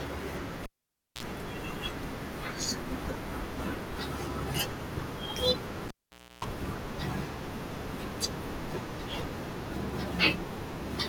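Cable pulled and plugged in, twice, at 0.63–1.23 s and 5.88–6.45 s in this speech clip. Each time a pop marks the live lead coming out, and the signal drops to near silence for about 0.55 s and then 0.52 s. As the plug goes back in, only its tip touches at first, picking up 60 Hz mains buzz for 47 ms in the first event and a much longer 306 ms in the second. A second pop follows as full contact restores the sound.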